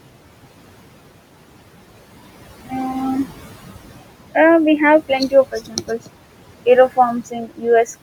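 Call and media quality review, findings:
Noise suppressor artifacts, throughout: room noise, about 15 dB below the speech, pumps down by about 17 dB in gaps and swells back under speech. Suppressor gain is switching per frame and per band, tracking what it classifies as steady noise.

Speech cut by the noise suppressor, 5.52–6.09 s: soft speech is swallowed, dropping by up to about 17 dB for roughly 300 ms. The low-level speech energy was misjudged as noise and attenuated with it.

Speech cut by the noise suppressor, 7.26–7.66 s: same symptom, with the deepest dip about 19 dB and roughly 300 ms affected. Quiet speech is turned down because the suppressor's noise estimate swallowed it.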